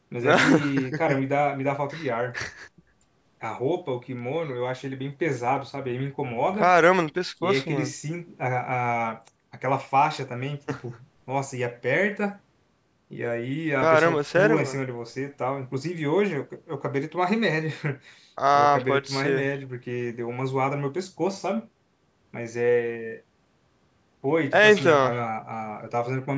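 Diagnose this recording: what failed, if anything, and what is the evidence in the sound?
Nothing stood out on listening to this speech recording, which carries the ordinary high-pass and band limiting of a call's microphone processing, with no content above 8 kHz.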